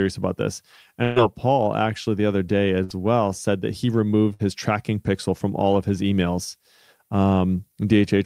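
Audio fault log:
1.03–1.19 s, 2.84–2.93 s and 4.34–4.42 s, burst of packet loss: after "about this" and twice more, the last sound is held and fades, then jumps ahead. Lost packets were covered by repeating the last sound, and about 120, 60 and 60 ms are missing.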